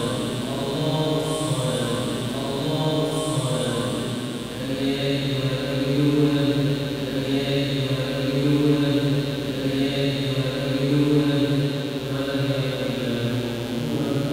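Mains buzz runs throughout: switching spikes, twice in every 60 Hz mains cycle, give a steady, raspy buzz roughly 15 dB below the signal, visible as evenly stacked horizontal harmonic lines.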